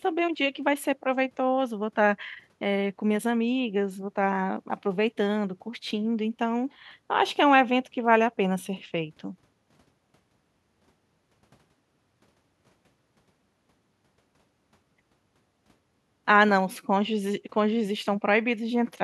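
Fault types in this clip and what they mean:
No technical faults can be heard in the signal at any point in the recording.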